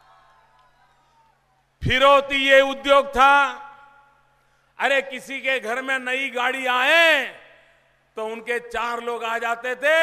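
No technical fault can be heard anywhere in the audio, with no dropouts, glitches, distortion or level jumps at any point.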